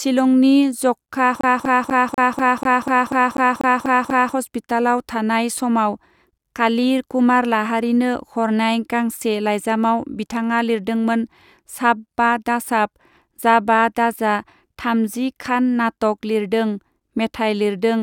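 From 1.41 to 4.35 s the speech stutters, the same 0.24 s slice repeating twelve times with brief mutes: a CD stuck on one turn, the laser jumping back each rotation.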